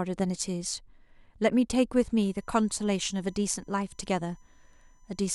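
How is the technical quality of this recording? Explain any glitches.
The recording has one fault: USB whine that begins at about 2.23 s and continues to the end of the speech. The computer's USB bus draws current in regular 1 ms frames, and that 1 kHz pulsing has leaked into the audio path through the power or ground wiring. You hear a thin, steady, fixed-pitch whine with energy at 1 kHz and its harmonics. It is most noticeable at 6 kHz and sits roughly 40 dB below the speech. On a spectrogram it shows as straight horizontal lines at 1 kHz intervals, brightest at 6 kHz, starting abruptly at 2.23 s.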